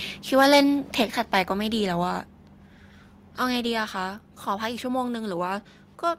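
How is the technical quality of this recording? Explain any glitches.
The recording has two recurring technical problems in the first couple of seconds: harsh peak distortion and sudden drops in level.

Microphone overload, at 0.34–0.60 s, 1.00–1.02 s and 1.35–1.39 s, adds a gritty, crackling edge to the loudest speech. The first burst is worst, pushing about 6 dB past full scale, and the later ones about 2 dB. The cause is likely input gain set too high, so the waveform tops are flattened at the converter's ceiling.

The microphone volume stepped down at 1.02 s, by about 6 dB, and again at 2.04 s, by about 2 dB. The speech and its background become quieter together, abruptly, the first time right after a distorted peak. That pattern likely comes from the call software reacting to clipping by cutting the microphone's input level in single steps.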